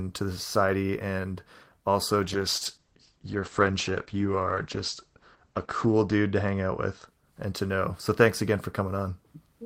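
Right after "the society and also", at 2.24 s, a call bitrate drop from 32 to 11 kbps cuts the top above 8 kHz and coarsens the speech until 7.13 s, before "and to know".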